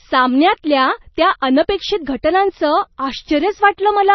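Throughout, the encoder likely ran short of bits under heavy MP3 compression, consistent with roughly 24 kbps. It removes everything above 5.9 kHz, leaving the speech dull and watery.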